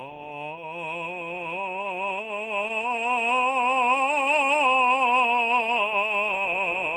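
Repeated stalls (stutter) run from 1.03 s to 3.58 s. In this stretch of music the receiver's jitter buffer emptied 37 times because packets arrived late or more slowly than playback consumed them. Each time, it extended the last sound to bridge the wait, adding about 365 ms in total, roughly 14% of the span. No single stall lasts longer than 13 ms and nothing is lost, but the music catches and drags in a rapid, uneven flutter.

A jitter buffer slow-down begins at 3.28 s, overlapping the end of the stutter, and lasts until 5.35 s. To rebuild its reserve, the receiver repeatedly duplicated single pitch periods and small quiet stretches. This added about 184 ms and slowed playback to 91% of normal speed without changing the pitch. The music sounds slightly stretched and lagging, with drawn-out tones.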